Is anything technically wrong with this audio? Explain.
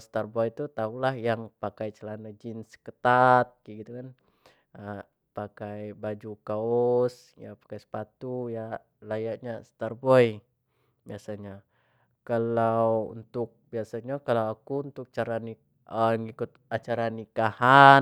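No, nothing in this speech recording stood out as a technical problem on listening.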